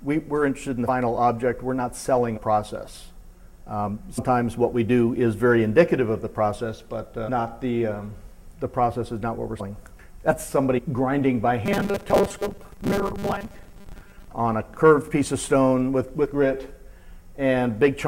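Compressed frames are skipped at 0.87, 2.36, 4.17, 9.59 and 10.77 s. The decoder drops a few whole frames each time, so the audio leaps ahead by roughly a tenth of a second, up to about a fifth at 9.59 s.

From 11.66 to 14.28 s the audio likely arrives too slowly, and a very short buffer is replayed to fill the gaps, with around half the material being repeats. That repetition imposes a fixed 200 Hz buzz, giving robotic sound from repeated short buffers, metallic and rigid while loosely tracking the original contour.

At 16.24 s compressed frames are skipped again, a smaller drop of roughly 50 ms, heard as another jump forward.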